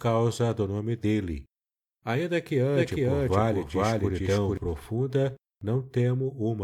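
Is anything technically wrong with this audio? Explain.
Yes. From 2.75 to 4.57 s there is a doubled audio track: a full-band copy at roughly equal level trails about half a second behind, starting and stopping abruptly. This is likely from a second, slower capture path.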